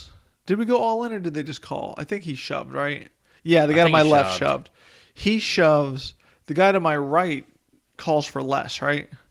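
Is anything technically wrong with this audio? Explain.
No, nothing here is technically wrong: the speech comes through Opus voice compression at 24 kbps in its hybrid fullband mode, which keeps the full frequency range and leaves only light coding traces.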